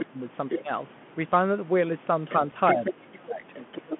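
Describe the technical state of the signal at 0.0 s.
Other side's voice leaking through from 0.00 to 0.06 s: a second voice, around 10 dB under the talker, sits in the opening instant. The likely cause is far-end audio from a loudspeaker that the echo canceller did not fully remove from the microphone pickup.

Speech suppressed in double talk from 0.05 to 0.18 s: the talker's level sinks, bottoming out roughly 15 dB down before recovering. This points to the canceller being unable to tell the talker from the echo and pulling both down together.

Bluetooth CVSD headset codec across the whole moment: the band is squeezed to 150 Hz–3.4 kHz, and the one-bit up/down encoding, consistent with a 64 kHz stream, leaves a granular hiss and scratchy, overloaded highs where its adaptive step cannot keep up.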